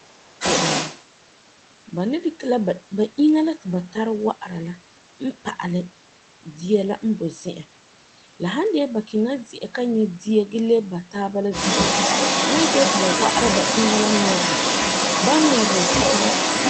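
Speech in which the opening 0.34 s dips sharply, by roughly 30 dB at its deepest, which is speech suppressed in double talk, likely an echo canceller ducking both talkers at once. A second voice, the other side's voice leaking through, is faint at 0.04 to 0.08 s, about as loud as the talker from 0.38 to 1.03 s, and slightly louder from 11.52 s to the end.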